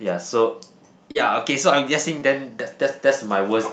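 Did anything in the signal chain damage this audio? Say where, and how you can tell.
Yes, at the network stage of the call: two bursts of short concealed packet loss, at 1.11 to 1.17 s and 2.19 to 2.23 s, heard as brief smears where about 40 ms and 20 ms of audio went missing. The decoder bridged each gap by extending the preceding sound before fading back into real audio. On a spectrogram, each patch looks unnaturally smooth within the call's roughly 8 kHz band.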